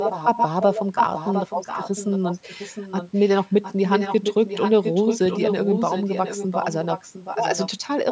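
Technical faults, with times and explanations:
0.0–0.81 s and 0.97–7.7 s, echo leak: a second copy of the speech trails the original by about 0.71 s, at first about as loud as the speech and later somewhat quieter. Likely a loudspeaker on the far end whose echo canceller let part of the returning sound through.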